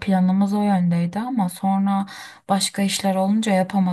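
From 0.0 to 2.0 s the speech carries a de-emphasis error: a treble cut was applied where no pre-emphasis existed or was applied twice, leaving 10 kHz about 8 dB below 1 kHz. It sounds dull and muffled, and a spectrogram shows upper bands fading smoothly darker.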